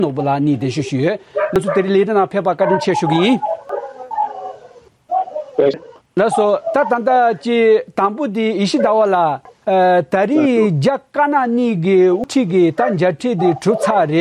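At 1.56, 3.69, 5.74 and 9.45 s, and over 11.87 to 12.24 s, damaged data in the compressed stream makes the decoder misread frames and lose sync while hunting for the next header. Each is heard as a chirp, squawk, click or short hole.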